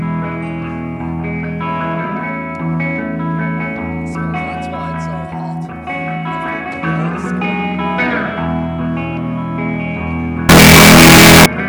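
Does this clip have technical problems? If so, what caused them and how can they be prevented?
Yes. From 10.49 s to 11.46 s the audio turns into a very loud, harsh distortion in which quiet moments are as loud as everything else. The likely cause is signed and unsigned mixed up on 16-bit samples. Reading the data with the wrong sign convention flips the top bit, so every zero crossing jumps across the full range. To prevent it, declare and check the sample format at every conversion and file boundary.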